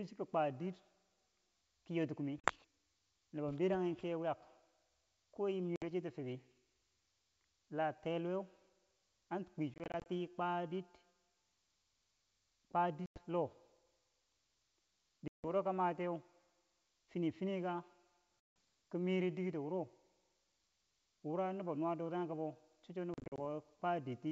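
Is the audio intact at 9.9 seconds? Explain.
No, 9.9 s sits inside a burst of packet loss on an ADPCM call, running 9.74 to 10.07 s: about 140 ms of sound drops out in short silent gaps, none longer than 20 ms, which points to around seven lost packets. Each gap knocks the decoder's predictor and step size out of step with the sender's, so the sound comes back slightly distorted before it settles.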